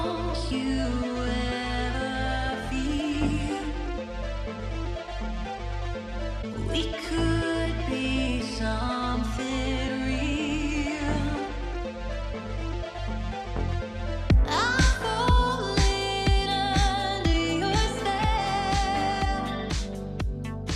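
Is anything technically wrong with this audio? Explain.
No, nothing technically wrong can be heard here.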